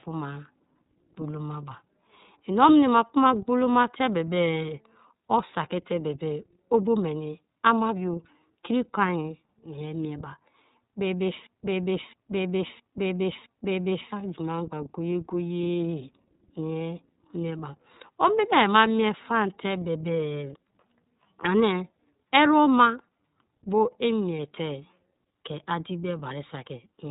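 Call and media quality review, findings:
iLBC codec, whole clip. Speech band-limited, nothing above 3.8 kHz; plainly audible roughness and synthetic texture. Each frame's excitation coded independently, which fits the 30 ms frame mode at 13.33 kbps. Probable component: narrowband VoIP codec on the call leg.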